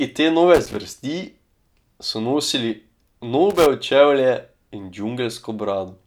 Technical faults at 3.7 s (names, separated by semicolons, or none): loose connector crackle